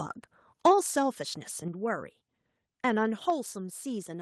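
The microphone volume stepped down three times, likely the call software lowering the device's input gain in a single step, at 0.67 s, 1.68 s and 3.3 s. Each time the speech and background drop together, by about 3 dB, 5 dB and 4 dB.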